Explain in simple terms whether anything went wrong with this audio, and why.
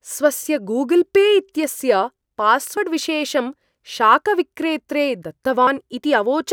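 The speech skips twice, at 2.77 s and again at 5.67 s. Each time about a tenth of a second is gone, and the two sides join with no gap. This is audio missing between chunks, likely from a recorder saving in 3-second pieces.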